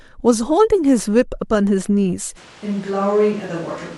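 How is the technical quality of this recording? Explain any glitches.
The recording has two faults, both late in the clip.

From 2.38 s to the end, the sound turns hollow and roomy at once. The level drops by about 5 dB. Bass thins out. Background noise rises to roughly 25 dB below the speech. This is likely a switch to a distant microphone. The close microphone's signal appears to have dropped out, leaving a farther one, perhaps on a camera. That microphone hears more of the room and less of the voice. The change is abrupt, and it never switches back.

At 3.44 s there is a tiny skip. This comes from an overlap between stream segments. Two pieces of the stream carried timestamps that overlapped. The player trimmed the overlap, though that audio was not truly duplicated. About 14 ms of real sound was discarded. The waveform jumps across the gap. It happens only once here.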